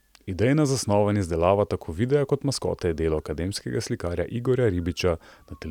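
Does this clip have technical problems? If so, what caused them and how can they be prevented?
No, there are no technical problems to report here.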